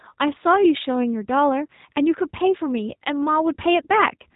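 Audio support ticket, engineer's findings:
Speech rough, slightly synthetic throughout; nothing above 3.8 kHz. G.729 codec, sound fits 8 kbit/s: speech rebuilt from vocal-tract filter, pitch predictor and sparse pulses per frame.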